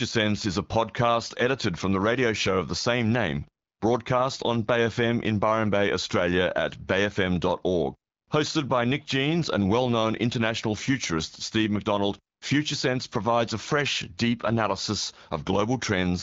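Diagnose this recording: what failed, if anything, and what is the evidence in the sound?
Nothing failed: the speech arrives through the AMR wideband (HD Voice) codec at 12.65 kbit/s, a rate at which that codec keeps speech clear, and no stage in the chain shows a fault.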